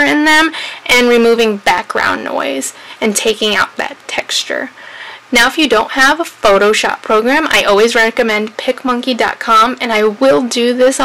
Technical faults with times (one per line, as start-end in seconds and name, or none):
0.00-11.05 hard clipping